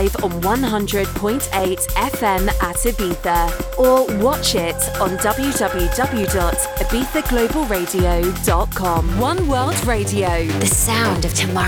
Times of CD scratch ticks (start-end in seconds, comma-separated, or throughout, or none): 0.58-1.80, 5.83-7.25